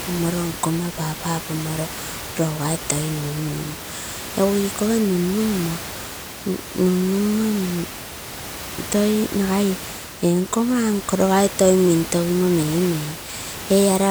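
The speech signal carries no technical faults, with only the room's own background noise sitting about 12 dB beneath it as part of the recording.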